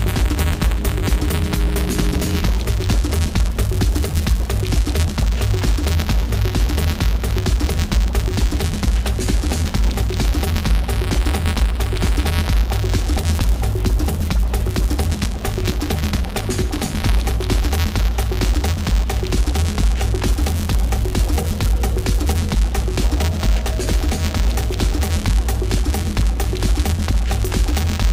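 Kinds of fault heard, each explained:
Buffer tearing: writer and reader of the ring buffer have slipped, so a small slice of each 256-sample period, roughly 2 percent, repeats audio about 20 ms old, giving a steady 172 Hz rattle under the signal.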